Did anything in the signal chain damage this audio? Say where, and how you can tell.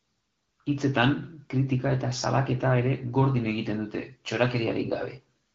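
No, the speech shows only the light coding texture of the AMR wideband (HD Voice) codec at 12.65 kbit/s, a rate at which that codec is working as intended, and nothing else in the signal chain has left any audible damage.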